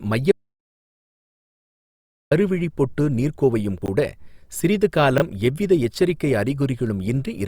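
At 0.32 s the speech stops dead. An audio dropout to silence follows and lasts until 2.31 s, about 2.0 s in all. The gap holds silence, with no room tone underneath. This points to the input being lost, likely through a failed link or device, while recording carried on writing silence. Whatever was spoken in those two seconds is gone. The voice then resumes mid-flow.

Two brief jumbled moments come later, both from chunks out of order. From 3.82 to 3.88 s, a 20 ms slice of audio plays two chunk-lengths after where it belongs. From 5.18 to 5.22 s, another 20 ms chunk lands one position late. No sound is lost either time. The order is wrong, though, and the misplaced pieces create hard joins. Each spot is heard as a quick garble.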